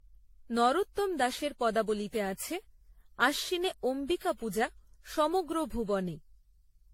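Speech throughout shows generation loss: a swirly, hollow, smeared quality with blurred consonant attacks and nothing above 16.6 kHz, fitting AAC-LC near 64 kbit/s. Unlike a single low-bitrate encode, the damage is worse than that rate explains, likely from around seven re-encodes on shifting frame grids.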